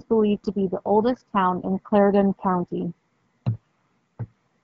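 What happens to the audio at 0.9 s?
Nothing goes wrong at 0.9 s: the speech passes through that moment intact, carried by the AMR wideband (HD Voice) codec at 12.65 kbit/s with no break or distortion.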